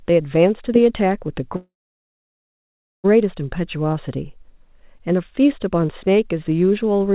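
At 1.56 s the speech stops and a short fading buzz gives way to silence until 3.06 s, then resumes exactly where it left off, about 4 kHz band-limited as before. This is a call audio freeze, likely from delayed packets draining the jitter buffer. Nothing is lost, but everything after arrives about 1.5 s late.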